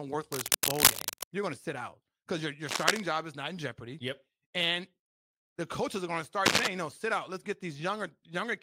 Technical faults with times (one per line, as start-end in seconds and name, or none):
0.32-1.25 cable scratch noise
2.69-3.01 cable scratch noise
6.45-6.67 cable scratch noise